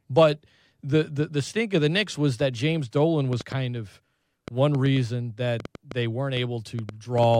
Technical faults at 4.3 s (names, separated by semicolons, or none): train of clicks